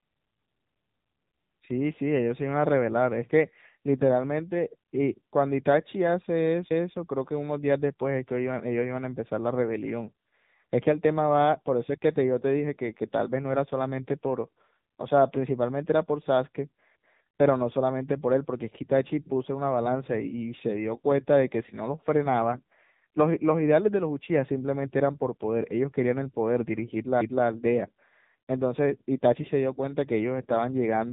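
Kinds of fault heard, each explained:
AMR narrowband mobile codec, throughout: the speech has passed through the 2G and 3G phone codec. It samples at 8 kHz and rebuilds the voice from a vocal-tract filter driven by a handful of pulses in each short subframe. Nothing above 3.8 kHz remains, so sibilants and airiness are dulled. The plainly audible buzzy, synthetic quality points to one of the codec's mid-range modes, which fits a bitrate near 8 kbps.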